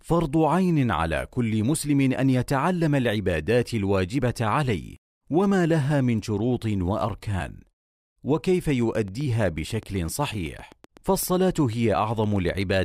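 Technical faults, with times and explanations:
8.70 to 12.75 s, train of clicks: a steady ticking of about 8 clicks per second lays over the speech, roughly thirty in all, each about as loud as the speech itself and audible in the gaps too. Most likely interference from nearby gear or a faulty connection or power supply.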